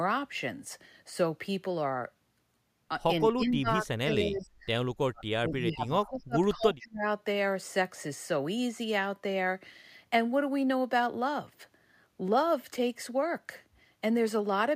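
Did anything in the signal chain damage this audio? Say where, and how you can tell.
Yes, the call processing damaged it. The speech is pushed down three times: 3.24 to 4.54 s, 4.95 to 6.38 s, and 6.55 to 7.05 s. It drops by roughly 30 dB or more, in pieces. This is likely speech suppressed in double talk: the echo canceller mistook live speech for echo.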